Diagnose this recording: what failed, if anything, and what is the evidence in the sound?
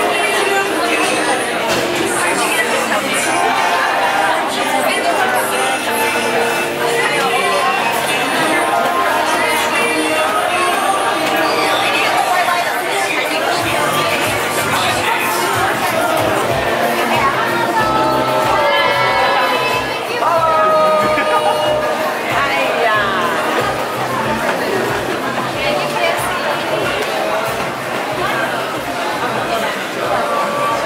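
Nothing failed; no fault is audible anywhere.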